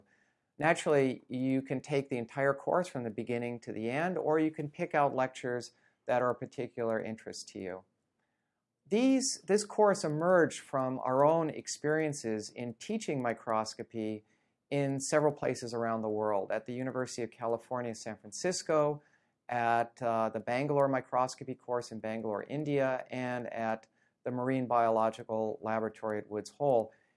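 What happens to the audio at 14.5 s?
At 14.5 s you're hearing the same thing that runs through the whole clip: the resampler restarted on every block. Each 100 ms chunk was converted on its own, so at every edge the filter had no real neighbouring samples and left a small error behind. Those errors come out as a steady tick at 10 per second, riding on the sound wherever there's signal. The rate was halved, from 48 kHz down to 24 kHz.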